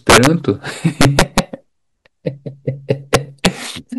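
Speech, with integer overflow at 0.10 to 0.27 s, 1.01 to 1.39 s and 3.14 to 3.46 s. The level there runs about 6, 8 and 5 dB past the integer limit. Peaks wrap to the opposite sign instead of clamping. Each burst cracks violently, sharper than clipping.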